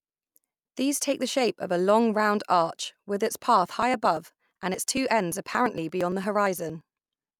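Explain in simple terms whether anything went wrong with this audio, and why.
Something did go wrong, starting right after "arch with its path". From about 3.71 s to 6.81 s the speech picks up a steady run of little ticks, one every 0.115 s, around thirty in all. That's the classic sign of periodic USB or driver dropouts. Something on the computer kept stalling the audio path on a fixed schedule, and each time a short slice of sound, roughly 10 ms, was simply skipped, so the speech jumps ahead with a click.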